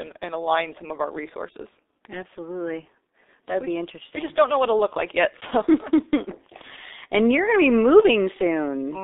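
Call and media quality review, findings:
G.723.1 codec, throughout. Speech muffled and hoarse, consonants smeared, band about 250 Hz to 3.7 kHz. Probable component: low-rate telephony codec, heavy damage, fits G.723.1 near 6 kbit/s; 30 ms frames and a slowly updated voice model blur transitions. Unlike a plain narrowband filter, the rasp and smearing occur inside the passband.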